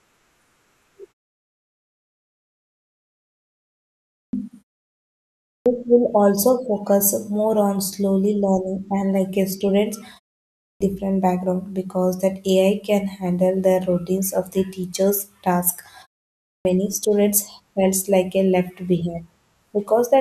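The output device drops into a sleep state during silences and needs about a third of a second to wake and lock again, causing clipped starts after pauses in this speech clip. After the gaps ending at 3.98, 5.31, 10.45 and 16.33 s, roughly 350 ms of sound is swallowed each time (about 320 ms at 16.33 s), so speech bursts in abruptly without its opening sounds, even after pauses as short as 0.34 s. The pauses themselves go quiet as expected.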